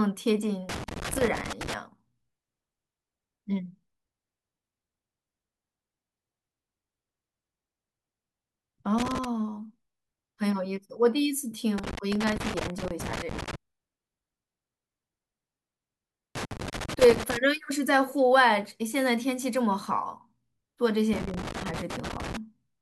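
Loose connector crackle breaks into the speech five times: 0.69 to 1.74 s, 8.98 to 9.25 s, 11.78 to 13.55 s, 16.35 to 17.37 s, and 21.13 to 22.37 s. Each burst is an irregular scratching crackle, from a quarter of a second to nearly two seconds long. A worn or dirty contact in the signal path is intermittently opening and closing, chopping the audio into fragments, and the abrupt level steps at each break add clicks and pops.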